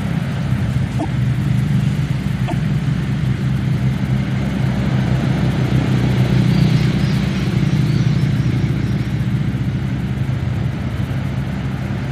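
At 0.98 s and again at 2.47 s, the audio skips forward and about 70 ms of garbled decoding follows. A broken MP3 bit reservoir is the likely cause: after missing frames, later frames, 26.1 ms each, decoded from the wrong bytes.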